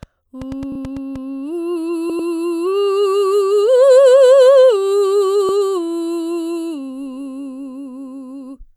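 From 0.03 to 1.17 s, a train of clicks ticks over the music. They arrive at an uneven pace, about 5.6 per second, roughly seven in all. Each pops out at about the level of the music itself. The clicks share much the same shape. An outside pulse source is the likely cause, such as nearby equipment or a faulty connection or power supply.

Repeated frames cause stutters. At 0.72 to 0.78 s, a 32 ms block plays twice more, which fits a single compressed frame. That adds 64 ms. At 2.10 to 2.29 s, a 96 ms stretch repeats twice, adding 192 ms. At 5.49 to 5.52 s, a 32 ms block repeats once, adding 32 ms. In each case the decoder plays the same audio again. A small blip can mark each seam. The clip grows longer by the repeated time.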